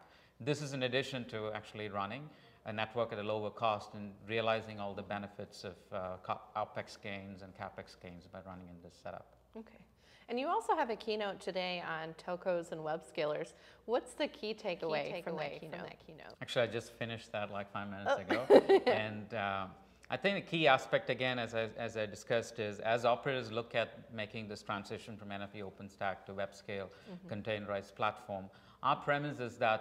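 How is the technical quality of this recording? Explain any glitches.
There's one glitch worth flagging. From 14.75 to 16.35 s you get a doubled audio track: a second copy trails about half a second behind, a few dB quieter, with no decay, and it starts and stops abruptly. That's likely a second, slower capture path or an edit leaving two copies out of step.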